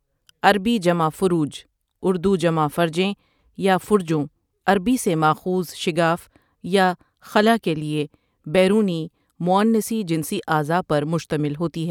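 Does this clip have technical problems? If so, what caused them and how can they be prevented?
No, nothing in this speech recording stood out as a technical problem on listening, so there is nothing here that calls for prevention.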